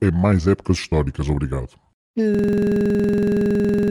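At 2.35 s the system hangs: the computer or its audio driver stops delivering new audio, but the sound hardware keeps replaying whatever is left in its ring buffer. This system hang loop makes one 46 ms slice of the speech repeat exactly, which fits a 2048-sample buffer, cycling at 21.5 Hz some three dozen times until the clip ends. At that rate the repetition sounds like a harsh, rapid rattling buzz that replaces the speech.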